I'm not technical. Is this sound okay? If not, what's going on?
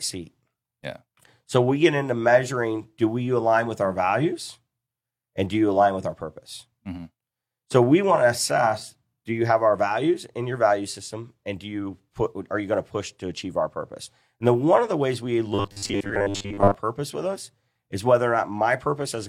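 No. From 15.55 to 16.75 s the speech turns into a rigid, metallic buzz. This is robotic sound from repeated short buffers. Most of the real audio is skipped there. A tiny slice keeps repeating, likely every 10 ms, which forces a steady 100 Hz drone.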